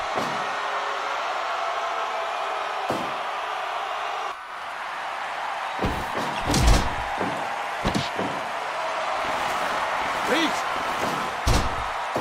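No dropouts, clicks, distortion or level problems turn up anywhere in the recording.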